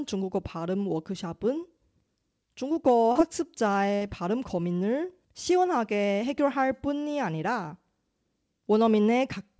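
At 3.12 s a short concealed packet loss occurs. About 40 ms of the stream failed to arrive in time, and the decoder covered roughly 32 ms of it by extending the preceding sound before crossfading back into real audio, lasting until 3.17 s. It is heard as a quick smear or wobble in the speech. On a spectrogram the harmonics or noise run unnaturally steady across that sliver, with a soft seam where genuine audio resumes.

From 3.95 to 4.03 s a burst of packet loss removes about 60 ms. The receiver filled that span by carrying the last sound forward and turning it down as it went, so a short held buzz or fading hiss replaces the speech, and the audio resumes slightly further along with that part gone. In the waveform the envelope decays smoothly through the gap. A spectrogram shows frozen, fading bands ending at an abrupt restart.

Across the whole clip, including both gaps, the spectrum stops at 8 kHz, which fits the WebRTC call path running G.722 at around 64 kbps.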